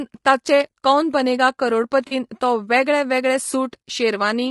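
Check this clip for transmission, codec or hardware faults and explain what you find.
Two faults here: a rough, coded quality across the whole clip, and a brief concealed dropout around 2.1 seconds.

Throughout, the speech sounds grainy and rough, with a noisy fuzz filling the gaps between the voice harmonics and a top end that sounds thin and somewhat synthetic. That points to low-delay AAC compression, likely AAC-ELD at a modest rate of around 32 kbps. At this low bitrate bits run short, so the encoder patches the spectrum with noise.

From 2.07 to 2.13 s, between "ताचे कौन बनेगा" and "तो वेगळे", there's a short smeared, noisy patch where the sound loses its clarity for about 40 ms. That's AAC frame loss with concealment, consistent with a couple of consecutive frames going missing. The decoder covers the gap by reusing the last good spectrum with scrambled detail, so instead of a hard dropout you hear a blurred, phasey smudge.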